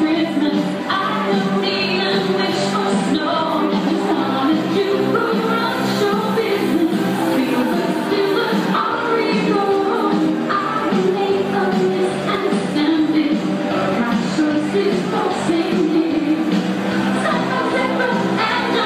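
No faults are audible anywhere in the recording, from its opening moment to its final one.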